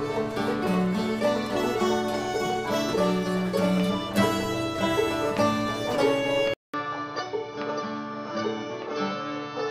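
At 6.54 s the recording likely switched its input to a poorer device, and the sound stays on that path to the end. A gap of about 200 ms marks the switch. Afterwards nothing reaches above 6.4 kHz, so the top end is cut off and the sound turns dull and boxy. The level drops by about 5 dB, and a new background noise sits roughly 40 dB below the signal.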